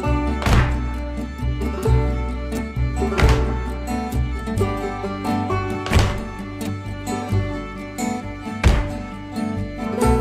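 There are no technical faults to describe at any point in the audio.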